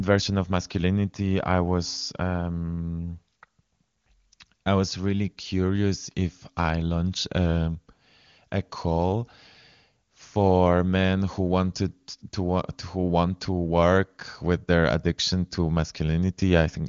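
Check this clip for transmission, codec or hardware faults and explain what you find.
No transmission, codec or hardware faults can be heard in this clip.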